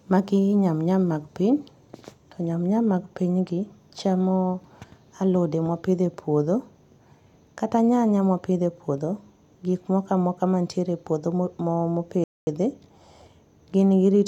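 A rebuffering stall occurs from 12.24 to 12.47 s: the player exhausted its downloaded audio and halted until more data arrived. The speech drops to silence for about 231 ms, then picks up exactly where it stopped, so nothing is lost, only time added.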